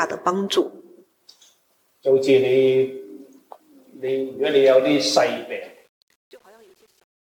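Truncation distortion on a fade runs from 5.17 s to the end at 7.32 s, during a fade-out that starts at about 5 s. The level stage keeps too few bits, consistent with a 9-bit path, and adds no dither, so the shrinking waveform gets forced onto a handful of coarse square steps. From 5.64 s onward the tail turns gritty.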